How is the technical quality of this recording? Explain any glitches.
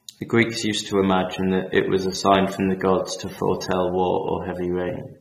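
The recording has one fault, plainly audible, running through its whole length: AAC compression. Throughout the speech, a low-bitrate AAC-LC encoder, likely one at 32 kbps, threw away detail its hearing model judged unimportant and removed everything above 16.1 kHz, leaving the sound dull and smeared, with a warbling, fizzy edge on sibilants.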